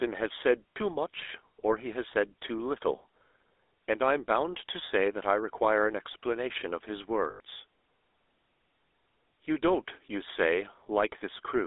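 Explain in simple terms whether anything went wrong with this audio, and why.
The speech was squeezed through the GSM full-rate codec, an old mobile-phone coder, so it sounds buzzy and gravelly, with nothing above about 3.6 kHz. Lost GSM frames near 0.70 to 0.77 s and 7.30 to 7.40 s were patched by repeating earlier sound, leaving brief rough, metallic rings.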